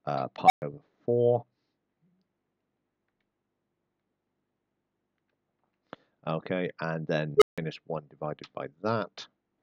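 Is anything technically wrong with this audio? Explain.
Yes. An unstable filter fires twice, at 0.44 to 0.62 s and at 7.37 to 7.58 s. Bad coefficients make a recursive filter run away. A tone around 700 Hz, then around 400 Hz, swells within 57 and 46 ms, clips, and drops to silence for 120 and 160 ms.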